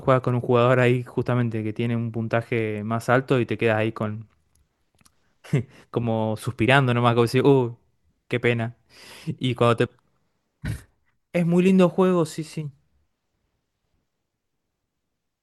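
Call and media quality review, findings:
Nothing to flag on this speech recording, no problems heard anywhere, so there's nothing to raise on this ticket.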